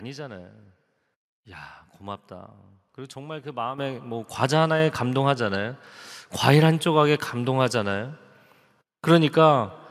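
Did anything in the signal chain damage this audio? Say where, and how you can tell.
Yes, the microphone volume stepped up at 3.78 s (about 8 dB) and 4.8 s (about 5 dB). Call processing raised the input gain, so the voice and background jumped together.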